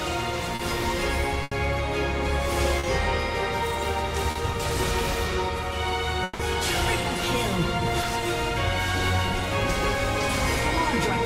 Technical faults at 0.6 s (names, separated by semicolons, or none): short concealed packet loss